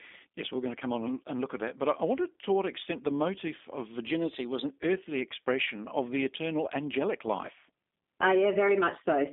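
Speech runs throughout with G.729 codec damage that is plainly audible. The band sits at roughly 250 Hz to 3.6 kHz with nothing above 3.7 kHz, so the low body and all upper sibilance and air are gone. The voice is rebuilt from a vocal tract filter, a pitch predictor and sparse pulses, which gives it the rough, slightly synthetic grain. This character fits an 8 kbit/s G.729A encode on a narrowband telephone line.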